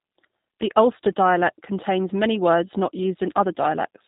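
From start to finish the speech sounds slightly rough, buzzy and synthetic, with plainly audible damage, and nothing is heard above about 3.8 kHz, leaving it narrow and muffled. This is the G.729 codec, most likely its G.729A form, which fits an 8 kbit/s VoIP stream. Rather than storing the waveform, it rebuilds each 10 ms frame from a vocal tract filter, a pitch predictor and a few pulses, which gives the rough synthetic texture.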